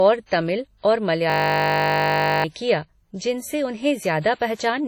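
Across the whole speech clip the sound is washy and ringing, with a hiss that swells and fades alongside the voice and nothing above 19.5 kHz. That heavy damage is likely WMA compression, and the smearing fits a low bitrate of around 32 kbps.

From 1.30 to 2.44 s the speech gives way to a steady buzz at 50 Hz, as one 20 ms slice repeats over and over. This is a system hang loop: the machine froze while the audio hardware kept replaying its buffer, losing about a second of audio.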